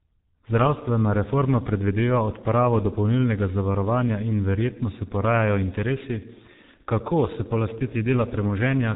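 Throughout, the speech sounds muffled and hoarse, with smeared consonants and nothing above 3.8 kHz. This is heavy G.723.1 codec damage, consistent with a low rate around 6.3 kbit/s.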